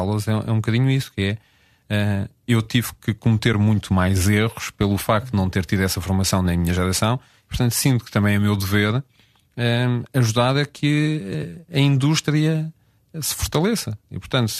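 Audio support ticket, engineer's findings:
Brief soft-edged dip at 3.53 s, between "eu tive que" and "muito mais erros pelo". AAC frame loss with muting on what is likely an AAC-ELD low-delay stream: one 10 ms frame lost, spectrum zeroed, overlapping windows fading out and back in.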